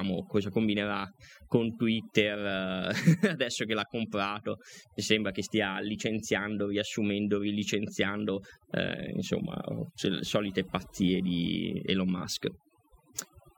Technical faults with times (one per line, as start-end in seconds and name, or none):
0.00-13.57 overdone noise removal